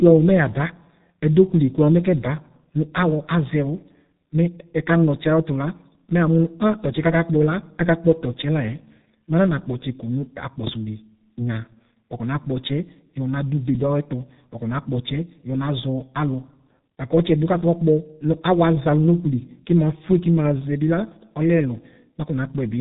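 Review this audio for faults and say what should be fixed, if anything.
The speech carries G.723.1 codec damage from start to finish, and it is heavy. Nothing above 3.8 kHz survives, so the sound is muffled and boxed-in. The codec rebuilds the voice from a coarse model refreshed only every 30 ms frame, which smears consonants and adds a hoarse, rough texture, consistent with its low-rate mode of around 6 kbit/s. To prevent it, carry the call on a wideband codec such as G.722 or Opus at a higher bitrate.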